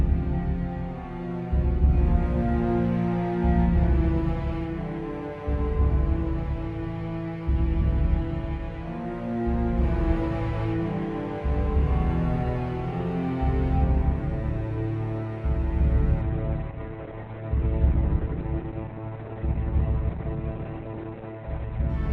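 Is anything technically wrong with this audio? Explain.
Yes. From 16.23 s to 21.95 s there is a call bitrate drop. The audio turns rough and muffled as the bandwidth narrows from 12 kHz to 4 kHz, consistent with the encoder falling from 32 kbps to 8 kbps.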